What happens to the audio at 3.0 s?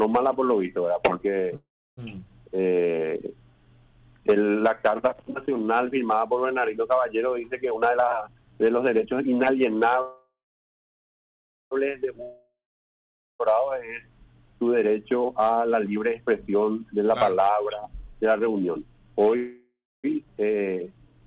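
Right at 3.0 s the sound is coming out of a stretch, from 2.50 to 3.00 s, where it plays slow but at an unchanged pitch, with drawn-out sounds, running at about 83% speed. This is a jitter buffer slow-down: the receiver's reserve of audio ran low or its target delay had just been raised, so it repeated individual pitch periods and fragments of pauses to rebuild it, adding about 93 ms before normal playback resumes.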